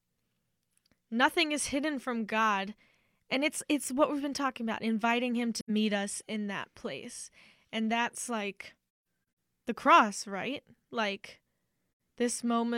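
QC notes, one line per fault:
5.60–5.70 s: AAC frame loss with muting. A soft-edged gap of about 85 ms, which fits two lost frames zeroed by the decoder. It fades out and in.
9.04 s: AAC frame loss with muting. Scattered dropouts over about half a second, the longest near 150 ms. They point to several zeroed frames, each faded by overlapping windows.
11.97–12.00 s: AAC frame loss with muting. Another soft hole of about 85 ms, which fits two muted frames. The window overlap smooths its edges.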